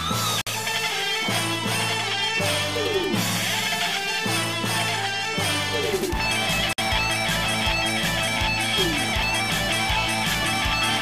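At 0.41 s the sound drops out for about 53 ms, then resumes at 0.47 s. At 6.73 s it happens again, also about 53 ms, ending at 6.78 s. Both are a gap at a join of encoded pieces. The audio was encoded in separate segments and spliced without trimming. Each segment kept its encoder's leading silence and padded final frame. The result is a short hole with smeared edges. The sound then continues from where it stopped.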